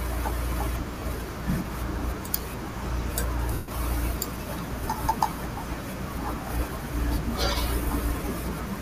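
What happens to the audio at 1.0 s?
From about 0.99 to 1.02 s the speech briefly turns into a short, noisy smear for roughly 30 ms, losing its clear tonal shape. This is lost LE Audio frames: the Bluetooth link dropped a short stretch of data, a gap that fits three 10 ms frames. The LC3 decoder covered the hole by repeating the last good spectrum with randomised signs, which keeps the level up but scrambles the detail into noise.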